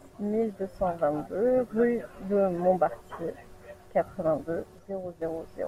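At 4.79 s the speech and its background noise drop abruptly together by about 6 dB, then return at 5.22 s. This sudden gain jump was likely caused by a digital gain change applied instantly between samples, with no ramp smoothing the transition.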